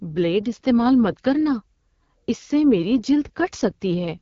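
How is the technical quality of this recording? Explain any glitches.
Technical quality is limited by one fault that runs through the whole recording: AMR wideband (HD Voice) codec damage. The speech was squeezed through a low-rate AMR-WB encoder, and the audible coarseness fits its 8.85 kbit/s mode, one of its lowest rates. At that rate the pulse-driven vocal tract model tracks the speech poorly, so the voice comes out rough and raspy throughout. Nothing is present above 7.4 kHz, which gives the top end a capped, muffled quality.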